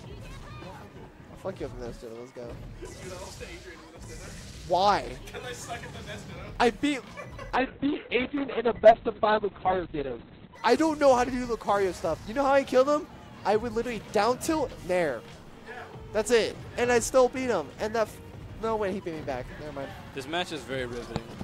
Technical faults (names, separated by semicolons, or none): call bitrate drop